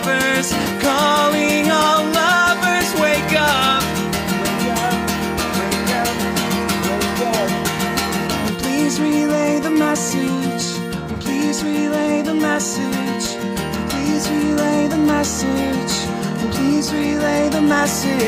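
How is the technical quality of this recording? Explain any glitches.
Nothing in this recording trips up the ear, so there aren't any glitches to explain here.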